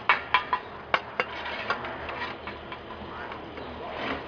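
No technical fault can be heard anywhere in this audio. Nothing in the recording calls for a time, a value or a cause.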